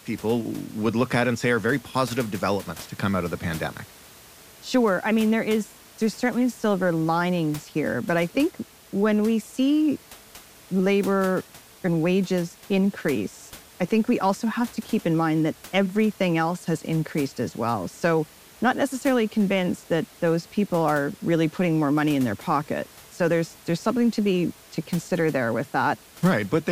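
Nothing stood out on listening to this speech recording, with the room's background noise sitting about 23 dB below the speech.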